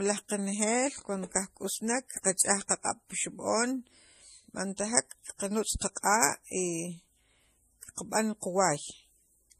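Throughout this speech recording, nothing sounds above 15 kHz, and two layers of coding damage overlap: a smeared, swirly haze fitting a low-rate MP3 near 40 kbit/s, plus a separate watery, tonal flutter fitting Vorbis around 50 kbit/s. This is likely transcoding between lossy codecs. A single low-bitrate encode would leave one consistent artefact type; here the second codec has spent its bits re-encoding the first one's damage, so both textures are heard together.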